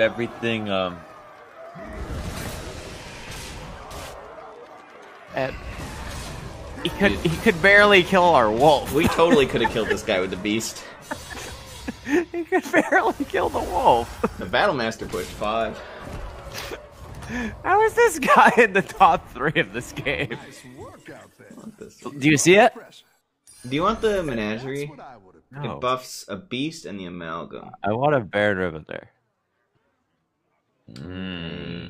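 Nothing in the audio stands out as a technical fault, so there's nothing here to flag or explain.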